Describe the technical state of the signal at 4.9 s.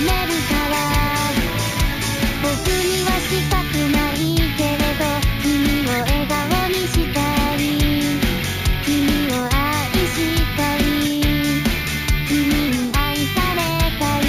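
At 4.9 s the signal carries imaging from sample-and-hold upsampling, present across the whole clip. The audio was raised from 16 kHz to 48 kHz by repeating each sample without a smoothing filter, so a mirrored copy of the band sits between 8 kHz and 16 kHz, about 16 dB below the signal. It is heard as a bright metallic fizz. Unlike steady hiss, it rises and falls with the sound's level, and its lowest copy moves opposite to the pitch.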